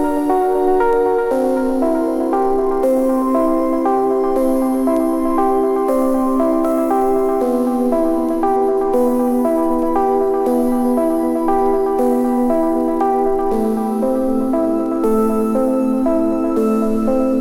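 No technical faults are audible.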